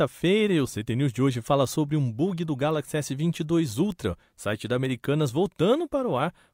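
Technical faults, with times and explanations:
1.65 s, 3.92 s and 4.85 s: bit error spike. Each is a single sharp tick that has nothing to do with the speech around it. A flipped bit in one sample at 1.65 s, and in two adjacent samples at the other two times, throws the value off by a power of two before it snaps back. That instant jump spreads energy across the whole spectrum. The ticks peak at about -23 dBFS, -23 dBFS and -29 dBFS.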